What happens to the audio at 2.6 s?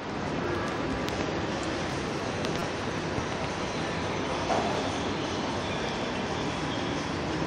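A repeated buffer from 2.59 to 2.61 s: a 5.8 ms block, fitting a 256-sample buffer, plays four extra times, giving a brief buzz. The waveform shows identical copies; the spectrogram shows evenly spaced vertical lines at the joins.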